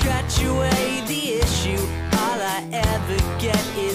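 Nothing here calls for comment, since the audio runs without any dropouts, glitches or other technical trouble along the way.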